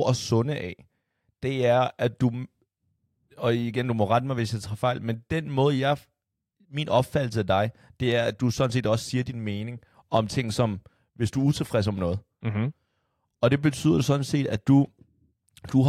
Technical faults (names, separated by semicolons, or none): none